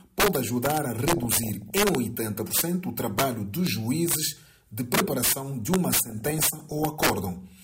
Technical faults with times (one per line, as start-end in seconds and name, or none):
0.00-7.63 integer overflow
1.14-1.89 DAB burbling
6.06-7.06 DAB burbling